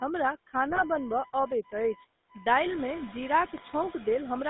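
Speech that went through a GSM phone call, with a few layers of trouble stacked up. The GSM full-rate codec colours all of it: the sound is squeezed into roughly 200 Hz to 3.7 kHz, and the codec rebuilds the voice from a vocal-tract filter driven by sparse pulses, which leaves that plainly audible buzzy, gravelly roughness. That fits the 13 kbps GSM full-rate coder. On top of that there's computer activity noise, a whiny buzz pulsing at around 1 kHz and sitting roughly 20 dB under the speech. It comes from the computer's load changes disturbing the shared audio ground, so it follows the machine's activity, not the talker. A noise suppressor is also pulling about 18 dB out of whatever it judges to be steady noise, frame by frame. The background drops away in the gaps and swells back under the speech, and the room noise comes up by about 13 dB around 2.5 s. Finally there are two bursts of GSM bit errors, at 0.70–0.83 s and 3.57–3.69 s. 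Each one spans a handful of frames in which corrupted filter, pitch or gain values make the voice break into squawks, pops and gargling.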